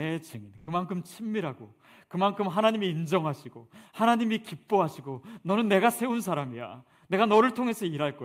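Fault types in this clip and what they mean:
Burst of packet loss: from 0.57 to 0.69 s a 100 ms gap is filled by stretching the last sound and letting it fade, so it becomes a held buzz or a fading hiss rather than silence, and the speech resumes 100 ms further on with that stretch missing, unlike a plain dropout.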